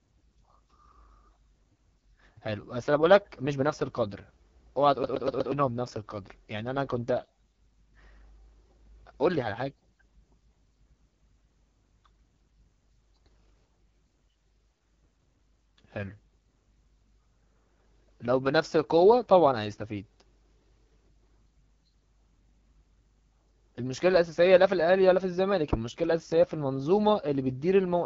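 AMR wideband (HD Voice) codec, throughout the clip: the speech has been squeezed through AMR-WB, which rebuilds the voice from a pulse-excited model of the vocal tract up to 6.4 kHz and pads the band above with shaped noise, leaving nothing past about 7.5 kHz. The damage is plainly audible: voiced sounds turn rough and raspy. That coarseness points to one of the codec's lowest rates, around 8.85 kbit/s.

CD stuck on one turn, from 5.03 to 5.52 s: the audio catches on a single fragment about 0.12 s long and plays it four times in quick succession, each pass cut off by a brief mute as the read position jumps back. This is the skipping-disc fault, where a scratch throws the laser back one track at the same point on every revolution. It produces a fast, even stutter before playback moves on.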